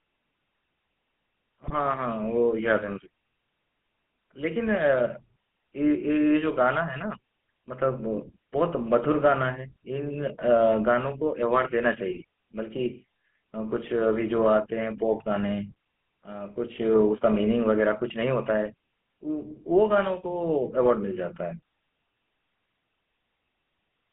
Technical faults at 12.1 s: GSM full-rate codec; GSM bit errors

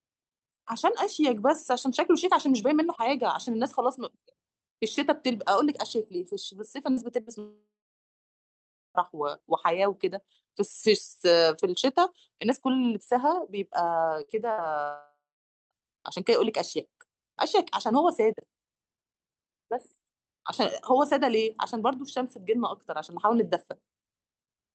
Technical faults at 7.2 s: burst of packet loss

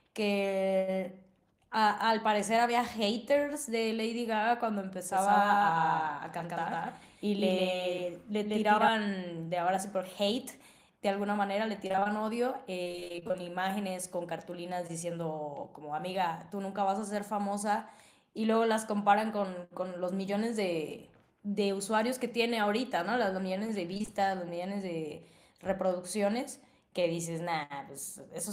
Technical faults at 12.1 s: repeated packet loss (robotic sound)

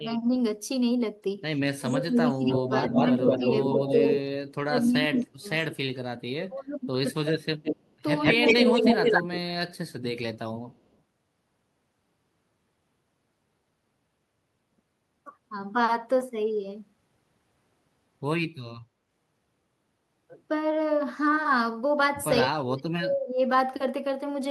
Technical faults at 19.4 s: none

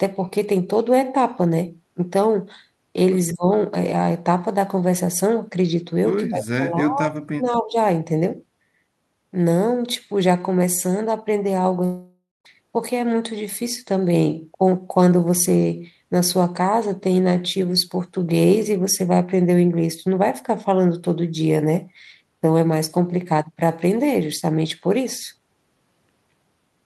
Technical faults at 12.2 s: long network dropout

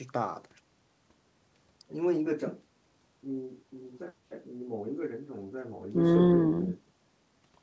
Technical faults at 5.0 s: none

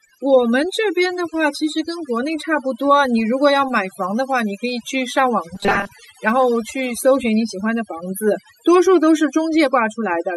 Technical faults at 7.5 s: overdone noise removal

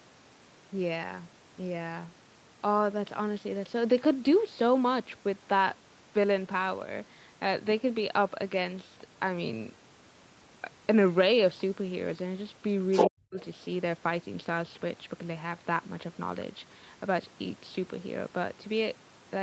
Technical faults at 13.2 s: other side's voice leaking through; speech suppressed in double talk

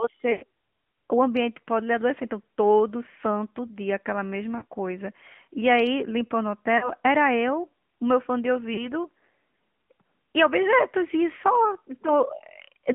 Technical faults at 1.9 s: AMR narrowband mobile codec

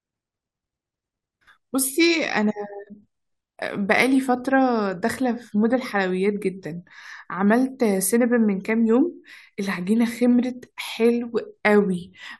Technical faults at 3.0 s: none

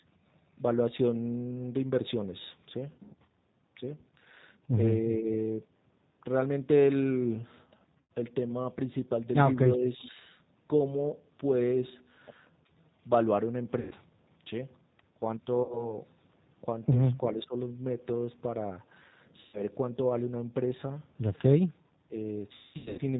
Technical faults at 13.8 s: G.729 codec; VoIP packet loss concealed by the speech codec

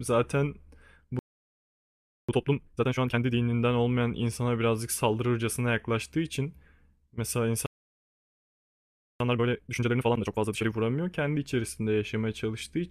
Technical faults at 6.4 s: none

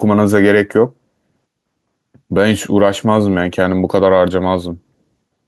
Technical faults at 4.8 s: gain pumping

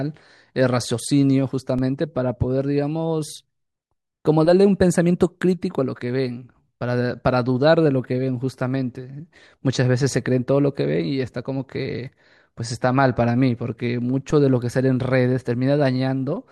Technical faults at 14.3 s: DC step

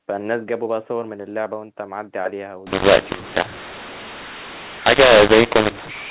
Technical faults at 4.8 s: mu-law and A-law mixed up

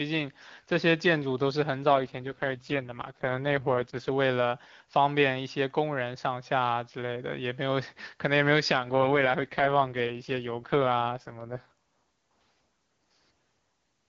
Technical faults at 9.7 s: AMR rate drop

